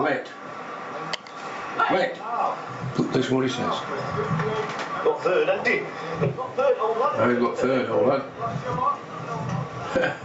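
Gain pumping runs through the whole clip, with the level swinging by something like 15 dB. The likely cause is input gain set far too high for the microphone, so a fast limiter or compressor clamps down on every peak and releases in the pauses. Loud and quiet passages end up squashed together, and the sound, already band-limited to nothing above 8 kHz by the call path, breathes unnaturally.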